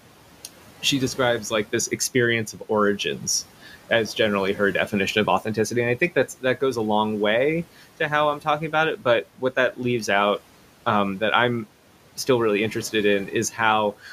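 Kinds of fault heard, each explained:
Noise suppressor artifacts: background noise, about 20 dB below the speech, dips about 12 dB between words and rises under them, unlike steady room noise.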